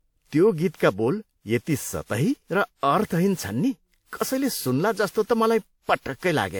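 Across the whole speech clip, from start to finish, the sound is swirly and hollow, with consonant attacks blurred, yet the spectrum stays full up to about 20.1 kHz. That mix points to generation loss, likely from the audio passing through a lossy codec around five times, consistent with WMA at 96 kbit/s. Each pass requantises on a shifted frame grid, so the smearing is worse than one encode at that bitrate would produce, even though the top end is not cut.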